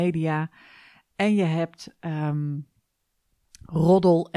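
Speech recording, with no technical fault audible anywhere in it.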